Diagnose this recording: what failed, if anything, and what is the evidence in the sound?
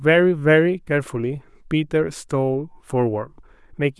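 Nothing in the signal chain points to a failure: the speech arrives intact and continuous at a steady level, with no dropouts, discontinuities or disturbances anywhere in the recording.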